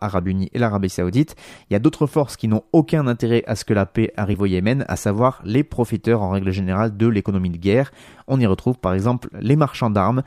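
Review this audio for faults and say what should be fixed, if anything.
At 4.33 s, just after "ce que la paix", compressed frames are skipped: about one frame of audio, around 30 ms, is simply never played, and the speech jumps forward. The frame length of 26.1 ms fits a dropped or rejected compressed frame. Because adjacent frames overlap, the join comes out as a short smeared blip rather than a sharp click or a silent gap, which is what separates it from a dropout. To prevent it, check file integrity and transport so that every frame reaches the decoder intact.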